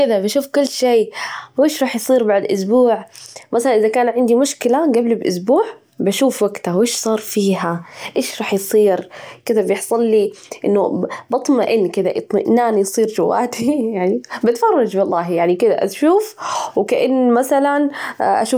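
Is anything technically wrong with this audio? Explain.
No, nothing technically wrong can be heard here.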